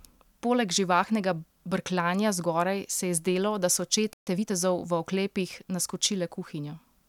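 At 4.13 s the speech drops out mid-flow and stays silent for about 135 ms until 4.27 s, then resumes. This playback stall is likely the player running short of buffered data or having its output thread blocked, leaving nothing to send until it recovered.

From 4.27 s to 4.53 s the speech sounds hurried, running at about 1.5 times normal speed with its pitch unchanged. This is time-compressed catch-up: the player trims its backlog by cutting small slices and cross-fading the remaining pieces together.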